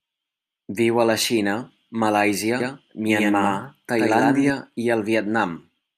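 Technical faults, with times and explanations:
2.60–4.50 s, doubled audio track: a second copy of the speech trails around 100 ms behind at about equal level, likely from a slower second capture path. It starts and stops abruptly, with no decay. A spectrogram shows syllables duplicated full-band, shifted right; the waveform shows overlapping envelopes.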